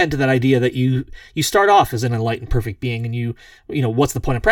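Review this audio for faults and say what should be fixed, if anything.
Channel delay (comb filtering) runs through the whole clip. One channel arrives roughly 3 ms behind the other, and when they are summed to mono the shared speech cancels at regularly spaced frequencies from about 200 Hz upward, leaving the voice hollow and phasey. To prevent it, time-align both channels before any mono fold-down.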